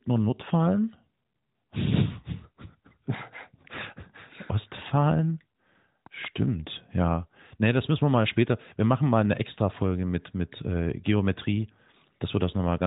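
At 6.06 s a loud pop hits, two sharp clicks within about 0.2 s (ending near 6.27 s) that stand roughly 10 dB above the speech, which carries on beneath them. The likely cause is a brief voltage pulse, such as a switch or static discharge. On the waveform they show as two tall, narrow spikes, and on the spectrogram as two thin vertical stripes, cut off at 3.8 kHz like the rest of the band-limited mobile-codec audio.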